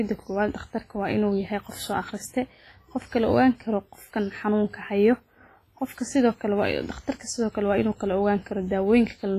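Speech that sounds ringing and washy from start to finish, with a hiss that swells and fades along with the voice and nothing above 15.4 kHz. This is likely heavy WMA compression, consistent with a low bitrate near 24 kbps, smearing quantisation noise across long blocks.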